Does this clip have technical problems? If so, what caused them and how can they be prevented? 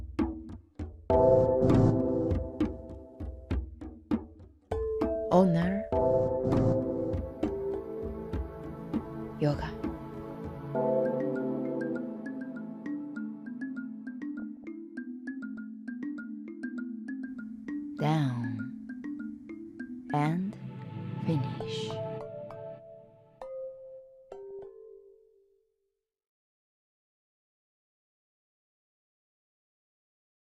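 Yes. DAB burbling occurs at 10.31 to 10.39 s, 14.39 to 14.64 s, 20.53 to 20.62 s and 24.43 to 24.64 s. Weak reception let bit errors slip past error correction into the MP2 data, so wrong samples put short blips of noise in single sub-bands. Improving the signal with a better-placed or higher-gain antenna prevents this.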